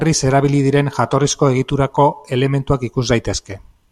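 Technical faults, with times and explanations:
1.97 s and 2.95 s, block of digital silence: twice, the output buffer was not filled in time, or a calculation produced invalid values, so a short run of samples was written as zeros, about 0.33 ms at 1.97 s and 0.67 ms at 2.95 s, which fits blocks of 16 and 32 samples. The speech drops to zero and jumps back with no fade, so each gap is far too brief to hear as a hole and comes across as a small tick.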